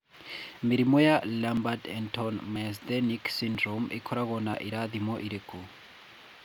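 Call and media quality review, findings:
Audio missing between chunks at 1.57, 2.56, 3.55 and 4.54 s in speech. Four brief skips, each dropping roughly 10 ms, spaced about one second apart, each join abrupt with no gap of silence. Likely the capture or processing stage handling audio in 1 s chunks and losing a sliver at each handover, the two sides spliced directly together, producing a regular stutter across the middle of the clip.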